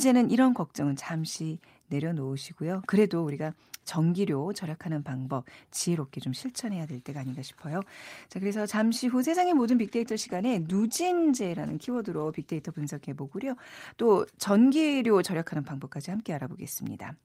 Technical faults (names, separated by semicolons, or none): call bitrate drop